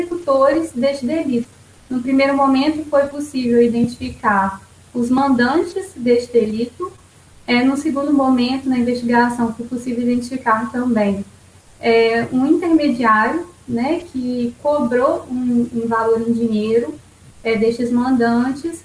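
Throughout, the high end sounds gritty and faintly metallic, with stray tones at unrelated pitches well below the main sound. This is aliasing. The spectrum runs hard up to 11 kHz, which fits a drop from 44.1 kHz to 22 kHz without filtering, so higher content folded back down.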